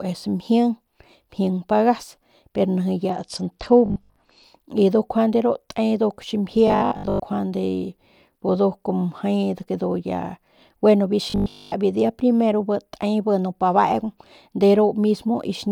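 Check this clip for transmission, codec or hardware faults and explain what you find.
Two kinds of fault can be heard in this speech: a stretch of dulled, gritty sound and three bursts of robotic buzzing.

From 3.1 to 4.4 s the treble goes dull and a gritty noise rises under the speech, then clears. This is a Bluetooth SBC bit pool drop: a congested link pushed the encoder down to what sounds like a bit pool of 11 instead of 31, around 83 kbps, starving the top sub-bands and coarsening the rest.

At 3.86 to 4.16 s, 6.68 to 7.24 s, and 11.30 to 11.76 s (after "ya gueno biu", before "biu dia primero bi") the speech turns into a rigid metallic buzz at 50 Hz. This is robotic sound from repeated short buffers, likely from audio arriving too seldom so that 20 ms chunks are replayed over most of each stretch.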